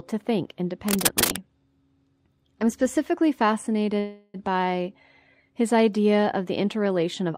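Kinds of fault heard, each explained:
Cable scratch noise: From 0.88 to 1.37 s, dense, uneven bursts of scratching sit over the speech, roughly as loud as the speech itself. This is likely a worn cable, connector or control being moved, so its contact resistance changes rapidly and adds noise.
Call audio freeze: From 3.99 to 4.36 s, the speech stops moving forward and the last sound is stretched into a fading buzz for about 346 ms, with no true silence. This likely comes from delayed packets emptying the jitter buffer. The speech then resumes where it stopped, with nothing lost but everything after arriving 346 ms later.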